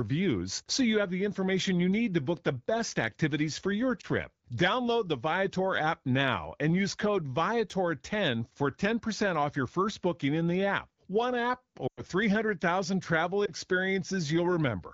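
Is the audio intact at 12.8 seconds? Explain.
Yes, at 12.8 seconds the audio is intact, with no fault at that moment.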